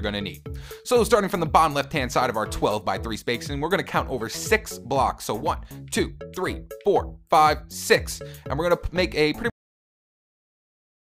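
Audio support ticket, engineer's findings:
Cut-off end at 9.50 s: sound stops mid-event, drops straight to digital silence, no decay or tail, dead air for the last 1.7 s. Final buffers never written or played out; playback or capture path ended before flushing them.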